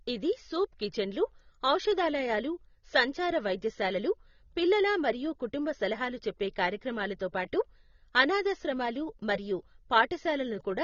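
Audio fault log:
Throughout: AAC compression. The speech is band-limited, with nothing above 6.9 kHz, and sounds dull and smeared, with plainly audible warbling and fizz on sustained sounds and sibilants. This likely comes from AAC-LC coding at a low bitrate, around 24 kbps.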